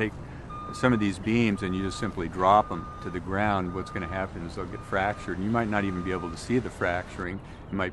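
From 1.23 to 1.26 s, a corrupt frame decoded, spanning what sounds like about two frames: flipped bits misplace energy across frequencies, giving an alien chirp, blip or burst rather than a dropout's smooth gap.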